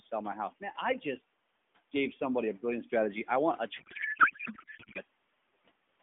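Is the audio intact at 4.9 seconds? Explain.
No. At 4.9 seconds the clip is inside a codec payload misread that runs from about 3.80 to 5.00 s. The AMR frames appear to have been packed in octet-aligned form but unpacked as bandwidth-efficient, so every field lands a few bits off and the decoder builds its speech model from the wrong parameters. The speech gives way to garbled noise and warble that barely tracks what was being said.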